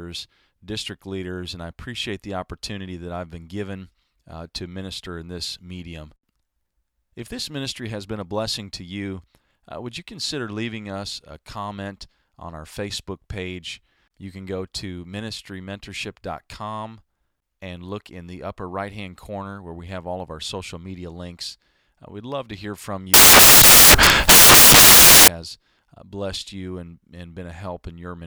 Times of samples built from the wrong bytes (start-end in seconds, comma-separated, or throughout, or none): 23.14-25.28